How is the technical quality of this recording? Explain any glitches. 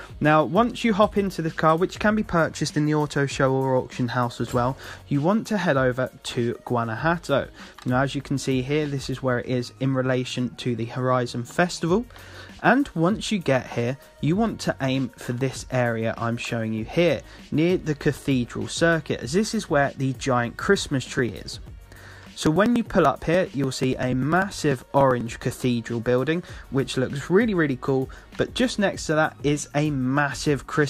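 The recording has one glitch: periodic USB or driver dropouts from 21.09 to 25.21 s. Throughout that stretch a couple of milliseconds of audio go missing every 0.098 s, about ten times a second and around forty times in all, and the sound closes up over each gap rather than falling silent. A recurring task stalling the audio path causes this. Each skip is a small tick, and together they form a steady rattle heard only while sound is present. The strict, even spacing separates it from random clicks or crackle.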